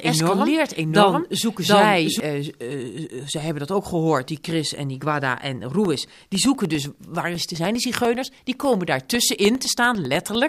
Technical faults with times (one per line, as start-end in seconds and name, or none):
0.00-2.20 doubled audio track
5.75-10.35 periodic USB or driver dropouts